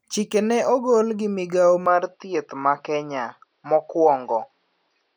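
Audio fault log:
1.86–5.16 s, likely input switched to a poorer device: after "ne ogol gi migao" the sound dulls without a gap, level steady. The spectrogram is empty above 5.8 kHz.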